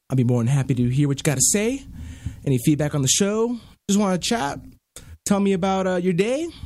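Nothing stood out as a technical fault on listening to this speech recording.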